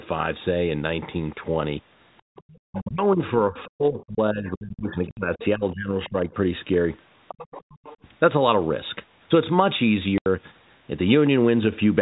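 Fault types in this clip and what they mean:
Background gated by the echo canceller: Around 2.22 to 2.36 s the room sound suddenly sinks, by about 38 dB at its deepest. The echo canceller clamped the microphone while the loudspeaker played. The background returns after roughly a tenth and a half of a second.
Other side's voice leaking through: A faint second voice creeps in at 2.36 to 2.89 s, 3.56 s, 5.4 s, 6.04 s and 7.28 to 7.97 s. It sits some 20 to 30 dB below the talker. It is likely loudspeaker echo that the canceller failed to remove.
Speech suppressed in double talk: From 2.69 to 3.2 s and 3.49 to 6.31 s the talker's voice dips, dropping by around 30 to 35 dB. This likely happens because both sides speak at once, and the canceller turns everything down.
Packet loss filled with silence: Hard-edged holes cut the speech at 5.11 s for 60 ms and at 10.18 s for 80 ms. Lost packets were replaced with plain silence. 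Both gaps are multiples of 10 ms, which fits 10 ms packets.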